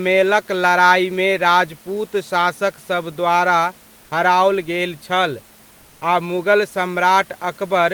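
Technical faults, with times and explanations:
5.81–6.01 s, comfort noise in place of the background: between "द्वारा हराओल गेल छल" and "आ मुगल", the room's background, about 34 dB below the speech, turns smooth, featureless and about 1 dB quieter for 0.2 s, likely discontinuous transmission with the receiver filling the pause with synthetic noise.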